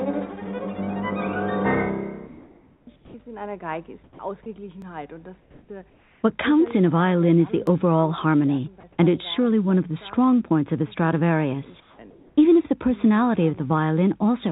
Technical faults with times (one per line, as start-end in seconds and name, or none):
2.96-3.14 comfort noise in place of the background
4.04-4.19 sound dropped by the voice detector
4.82 dropped buffer (overrun)
5.42-6.23 comfort noise in place of the background
7.67 dropped buffer (overrun)
8.80-8.83 sound dropped by the voice detector
11.80-12.37 comfort noise in place of the background